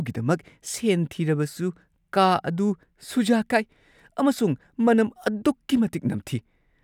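No faults are audible anywhere in the recording: no dropouts, glitches, distortion or timing errors.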